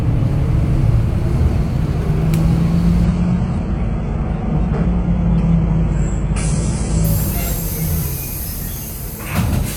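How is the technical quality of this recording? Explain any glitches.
The recording has one clear fault, a drop to a lower-quality stream in the middle.

From 3.05 s to 7.05 s the adaptive stream is at a lower bitrate. The connection slowed, so the player switched to a leaner encoding without pausing. The change is abrupt, with no gap. Nothing is heard above 10.5 kHz. What treble remains sounds synthetic, and codec artefacts thicken. The sound points to a very low-rate HE-AAC stream, roughly 12 kbit/s. Full quality returns at 7.05 s.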